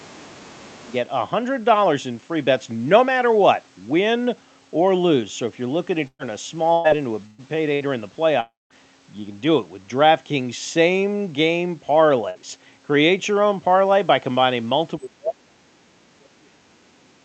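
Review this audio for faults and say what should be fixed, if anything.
A second, fainter voice sits under the talker at 0.00–0.11 s, 0.29–0.56 s and 0.84–0.94 s. It is about 30 dB below the speech. This is the other side's voice leaking through, likely loudspeaker echo the echo canceller left behind. Better acoustic isolation or a stronger echo canceller would prevent it.

The talker's level sinks from 0.00 to 0.92 s, by about 20 dB at worst. It sinks again from 14.98 s to the end at 17.24 s, by about 35 dB. This is speech suppressed in double talk. The canceller likely mistook the talker for echo while both sides spoke, and pulled everything down. Tuning the canceller's double-talk detection would prevent it.

A burst of packet loss occurs at 6.07–6.22 s, 6.73–6.87 s, 7.26–7.41 s, 7.74–7.83 s and 12.30–12.38 s. Each removes 120 ms or 60 ms of audio. The receiver stretches the last sound into a fading buzz or hiss. 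At 6.07 s this ends in 60 ms of silence. Forward error correction or a deeper jitter buffer would prevent it.

A long network dropout appears at 8.40–8.73 s, and about 300 ms of audio is lost. The concealment fades out, leaving roughly 180 ms of near silence before the sound resumes further on. The likely cause is a stall in the network. A more stable connection would prevent it.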